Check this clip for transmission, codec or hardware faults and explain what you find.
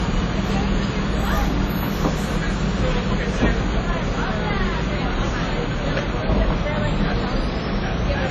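One codec fault runs through the whole clip. Low-bitrate audio saved at a high bitrate, throughout: the file is likely a low-bitrate encoding, perhaps early WMA, later re-saved as high-bitrate MP3. Nothing exists above 13.3 kHz, and the first codec's artefacts remain, since the larger second encoding cannot restore what was discarded.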